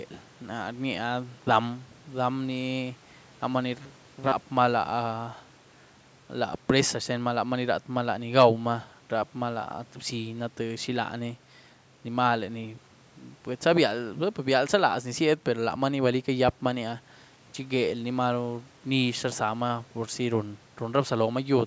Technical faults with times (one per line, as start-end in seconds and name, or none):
3.79-4.32 robotic sound from repeated short buffers